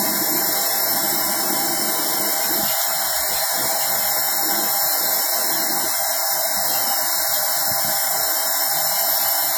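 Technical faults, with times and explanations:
throughout WMA compression: likely a low-rate transform codec fitting about 48 kbps, whose long blocks smear quantisation noise into plainly audible ringing, washiness and hiss that breathes with the sound.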